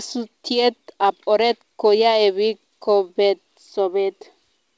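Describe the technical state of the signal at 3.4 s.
At 3.4 s the speech is intact, with no dropout, click or distortion, only the band limit of the WebRTC call path, which leaves nothing above 8 kHz, consistent with a wideband codec such as G.722.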